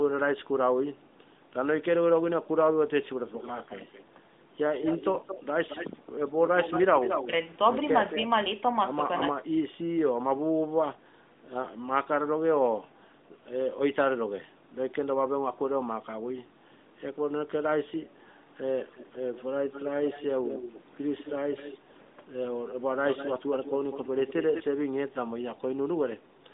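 Speech over a narrowband mobile link, with nothing above about 3.8 kHz, consistent with AMR-NB at around 12.2 kbps. From 7.26 to 7.33 s the level dips by about 5 dB for roughly 70 ms, which is speech suppressed in double talk, likely an echo canceller ducking the talker while the far side spoke.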